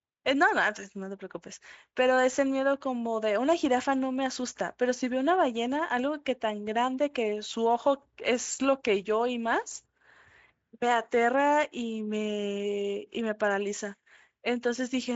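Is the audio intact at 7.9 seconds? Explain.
Yes, the audio is intact at 7.9 seconds, with no fault at that moment.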